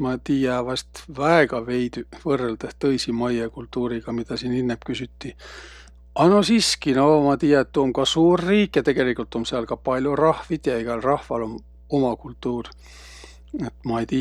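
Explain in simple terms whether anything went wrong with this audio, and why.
There's mains hum under the speech the whole way through, a steady low 60 Hz buzz from power wiring leaking in, probably a ground loop.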